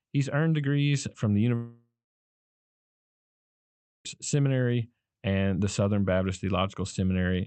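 A speech clip, carried over a call codec that limits the sound to about 8 kHz. Right after "earned degrees from the", at 1.55 s, the audio stops arriving. The last sound is stretched into a fading buzz for a few tenths of a second. Then near-silence holds for about 2.15 s. Speech returns at 4.07 s, and about 2.5 s of it is simply gone. This is a long network dropout, likely caused by packets failing to reach the receiver for that stretch.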